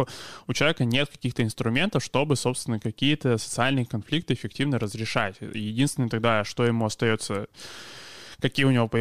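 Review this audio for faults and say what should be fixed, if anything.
Nothing needs fixing, since the speech signal stays continuous and stable throughout, with no audible technical faults.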